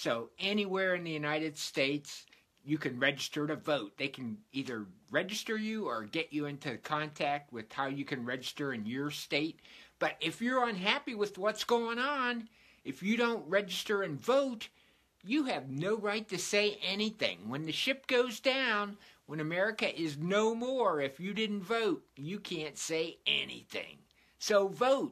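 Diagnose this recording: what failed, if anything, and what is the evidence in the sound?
Nothing failed: the sound gives no evidence of a fault at any stage.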